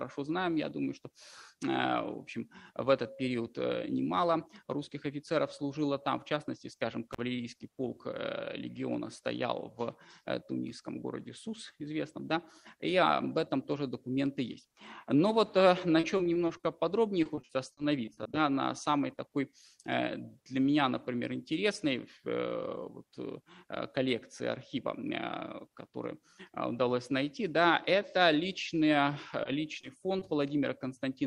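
At 7.13 to 7.21 s there is an intermittent contact: a loose connection opens for about 39 ms. The sound drops out abruptly, with crackle at both edges where the contact breaks and remakes, and faint hiss fills the open moment.

From 15.99 to 16.65 s and again from 17.23 to 18.35 s, repeated packet loss gives a robotic sound. Holes of up to 40 ms arrive in quick succession, each patched by extending the preceding sound. About a fifth to a quarter of each stretch is concealed, so the audio turns choppy, with pieces missing.

At 29.43, 29.81 and 30.19 s there is short concealed packet loss, with each hole about 20 ms long. The receiver bridges each gap by continuing the last sound and then blending back into the real signal, leaving a brief smear or wobble at a regular spacing of roughly 0.38 s.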